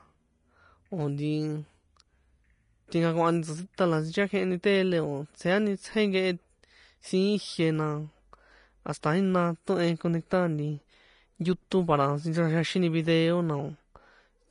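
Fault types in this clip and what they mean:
Vorbis compression: likely low-bitrate Vorbis coding, nothing above 10.5 kHz and coarsely quantised treble turned to hiss, making the speech grainy throughout.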